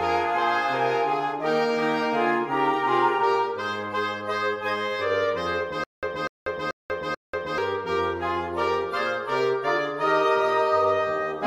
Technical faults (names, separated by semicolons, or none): stutter with silent gaps